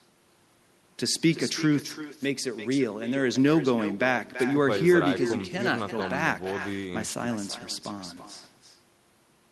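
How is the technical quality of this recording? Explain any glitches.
The main problem is an echo with no canceller, present for the whole recording. Each phrase is followed about a third of a second later by a copy roughly 12 dB quieter. The far end's loudspeaker feeds its microphone, and nothing removes the return. The copy sounds thin. Behind it, the call codec's band limit is audible, with the top end stopping near 12 kHz.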